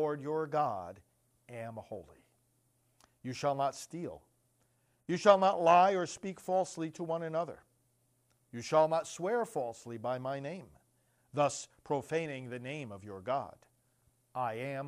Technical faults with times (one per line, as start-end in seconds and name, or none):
3.75-7.65 Bluetooth SBC bit pool drop
10.33-14.29 Bluetooth SBC bit pool drop